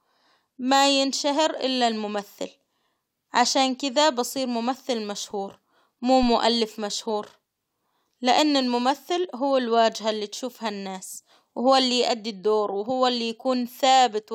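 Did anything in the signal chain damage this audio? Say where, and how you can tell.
Yes. A phantom power thump sits in the analogue input stage at 6.23 to 6.34 s: a deep, low-frequency bump peaking around -22 dBFS that dies away in about 26 ms. A supply switching on a live input pushes a voltage step through the coupling capacitors. A plosive pop would be shaped by the speech itself, but this is a single step-driven thud with no connection to the speech.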